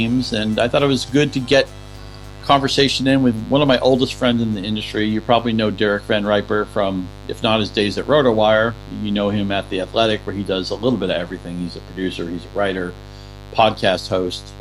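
Mains buzz runs throughout: switching spikes from 50 Hz power reach the signal path, producing a steady, raspy buzz roughly 20 dB below the sound, with harmonics extending into the kilohertz range.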